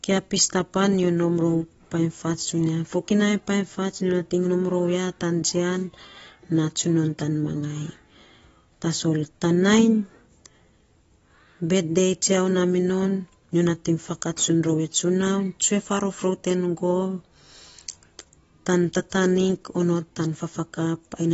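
From start to finish the speech sounds dull and smeared, with a fizzy, warbling texture on sustained sounds and sibilants, and nothing at all above 7.6 kHz. This is AAC compression damage, likely from AAC-LC at a low bitrate, which fits roughly 24 kbps. With so few bits, the encoder drops the top of the spectrum and coarsely quantises what remains, leaving gaps that smear detail and make hiss-like sounds swirl.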